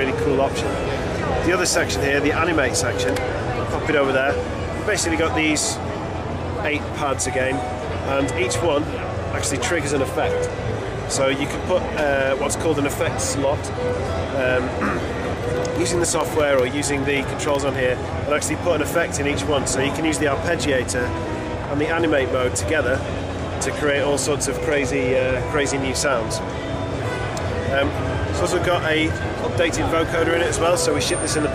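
Periodic USB or driver dropouts from 15.25 to 17.75 s blank tiny slices every 64 ms, ticking at a steady rate unlike random clicks.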